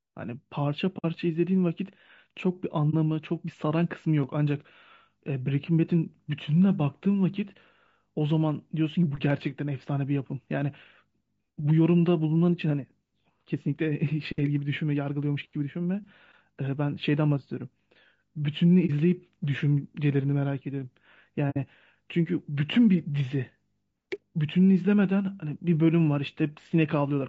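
Low-delay AAC compression runs through the whole speech clip, likely the short-frame AAC-ELD codec at a low rate near 32 kbps, leaving voices plainly rough and grainy.

AAC frame loss with muting occurs at 0.98 to 1.05 s, 2.90 to 2.94 s, 18.86 to 18.90 s and 21.50 to 21.57 s. The decoder zeroed the lost frames, leaving soft-faded gaps and brief dips of 60, 30, 30 and 60 ms.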